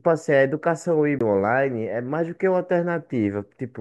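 At 1.19 to 1.21 s, a CD skip: the laser jumped tracks, leaving a brief muted tick, then the speech resumes from a shifted position, unlike a dropout.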